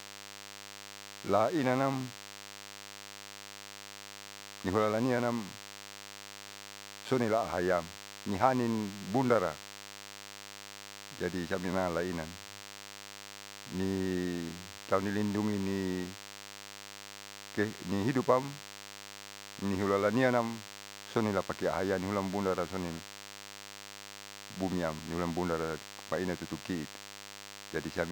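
A DECT cordless phone buzz runs through the whole speech clip. A nearby handset or base station transmits a radio burst 100 times a second, and the audio circuitry rectifies it into a thin, steady 100 Hz buzz rich in harmonics, sitting about 15 dB below the speech.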